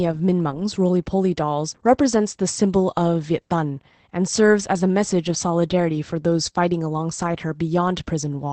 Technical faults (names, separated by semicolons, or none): Opus voice compression